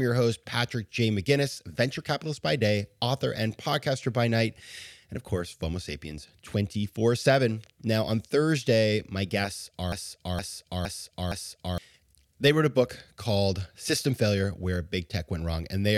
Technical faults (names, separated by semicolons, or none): broken-record loop